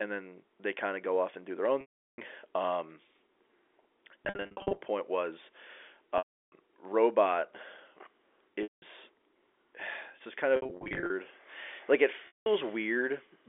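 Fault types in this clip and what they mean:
Packet loss with pitch repetition: Lost stretches were bridged by repeating the last pitch period, heard as buzzy held sound fading to silence, six times, some in scattered bursts.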